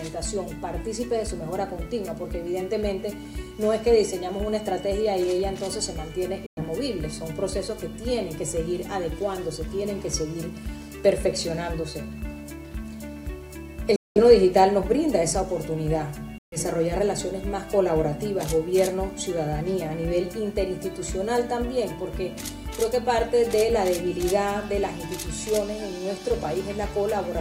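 The audio cuts to silence three times: 6.46 to 6.63 s, 13.96 to 14.20 s, and 16.38 to 16.57 s. The sound resumes further along, as if it had kept playing. These are likely Bluetooth dropouts from late packets.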